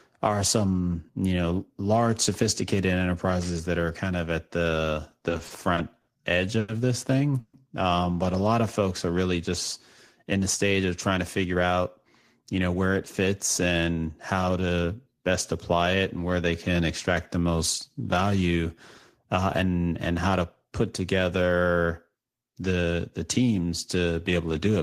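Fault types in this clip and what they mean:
Repeated stalls (stutter): after "kind of at the", seven brief holds between 5.11 and 6.10 s, the longest 60 ms, make the speech stutter repeatedly rather than pause once.
Short stall from a late packet: at 6.59 s one sound is stretched for about 90 ms while a single packet is awaited. It is an isolated hold, not a chain of them.
Call audio freeze: at 7.40 s the sound turns to a fading buzz, then 30 ms of silence before "um but a lot", likely from packets held up in transit. The fade to silence sets it apart from a plain stall.
Jitter buffer speed-up: after "folks are really just", 10.23 to 11.70 s plays 9% fast at unchanged pitch as roughly 150 ms of excess buffered audio is trimmed. The speech sounds hurried rather than held or gapped.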